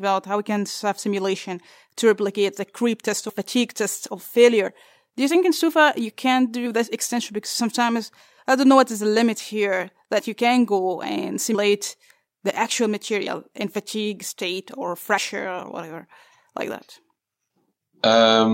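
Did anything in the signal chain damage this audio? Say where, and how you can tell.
Yes. The speech lurches forward with a soft, smeared blip at 3.28, 4.67, 6.65, 10.18, 11.54, 13.26 and 15.17 s, each losing a few tens of milliseconds (about 150 ms at 11.54 s). These are compressed frames skipped at the codec stage: whole 26.1 ms frames never decoded, with frame overlap blurring each join.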